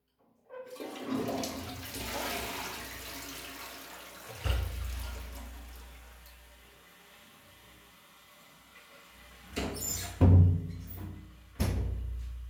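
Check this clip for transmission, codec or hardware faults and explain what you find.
Nothing to report: no faults are audible at any point in the audio.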